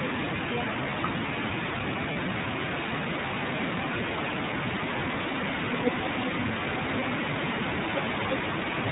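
From the first second to the last, the speech carries the sound of the iLBC codec. Everything above 4 kHz is gone, so the voice is narrowband and dull at the top. The coding damage is plainly audible. Voiced sounds take on a slightly rough, synthetic edge. That fits iLBC at about 13.33 kbps with 30 ms frames. Each frame's excitation is coded alone.

At 2.12 s, lost iLBC frames interrupt the speech for about 0.04 s. The gap points to a single 30 ms frame going missing. The decoder covers it by repeating the last pitch cycle mixed with noise. It sounds like a short, held, faintly buzzy vowel. The frames stand alone, so the voice recovers almost at once by 2.16 s.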